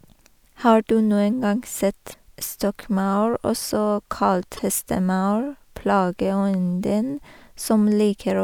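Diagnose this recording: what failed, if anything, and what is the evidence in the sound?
The failure is at the codec stage: damaged data in a compressed stream. Two short glitches cut through the speech, one from 2.10 to 2.14 s and another from 4.55 to 4.59 s, each about 40 ms of broken audio in place of the speech. That's the decoder hitting corrupted bytes, misreading or rejecting those frames, and losing sync until it finds a clean frame header to pick up from again.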